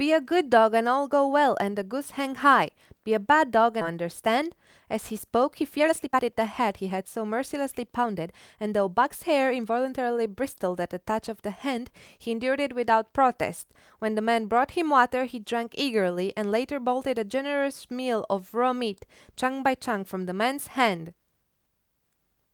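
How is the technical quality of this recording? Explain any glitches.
The recording has two timing glitches.

From 3.81 to 3.83 s there is a skip ahead: roughly one and a half seconds of speech were discarded, and playback jumps straight to later audio with no fill. On a waveform the envelope changes abruptly at a near-seamless splice; a spectrogram shows formants cut off mid-pattern.

From 5.35 to 9.99 s a jitter buffer speed-up runs the speech at about 111% while keeping the pitch. The receiver trimmed short pitch-period chunks repeatedly, about half a second in total, so delivery sounds hurried. A spectrogram shows compressed syllable spacing with unchanged harmonic spacing.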